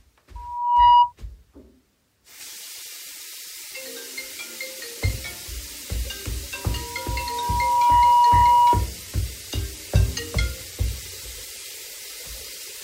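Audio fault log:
0.35–1.13 s and 6.54–8.89 s: loudspeaker feedback squeal. The microphone-speaker loop exceeds unity gain at 963 Hz, so a pure tone swells over roughly half a second, then a second and a half, to about 15 dB above the sound. On a spectrogram it is one bright horizontal line; the waveform's envelope balloons.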